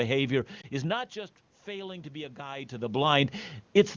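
Around 0.61 to 0.66 s there's a quick warbly dip: one lost AMR speech frame, 20 ms, that the wideband decoder patched over by extrapolating from the previous frame. From 0.76 to 3.08 s, after the level falls about 17 dB as the talker moves, automatic gain rises slowly, lifting voice and room noise together by about 4 dB.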